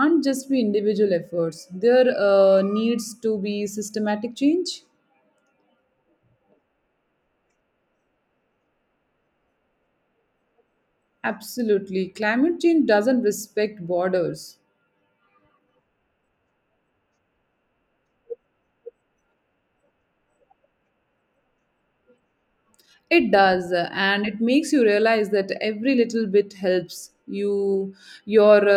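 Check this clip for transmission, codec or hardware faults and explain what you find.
Listening to the speech here, nothing stood out as a transmission, codec or hardware problem.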